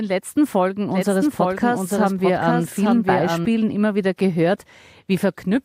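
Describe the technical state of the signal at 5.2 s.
At 5.2 s the speech signal is intact, with no audible fault at that moment.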